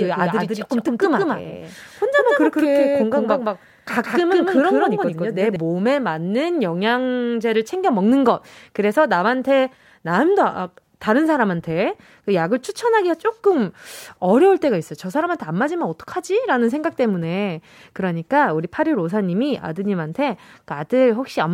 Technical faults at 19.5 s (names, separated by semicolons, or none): none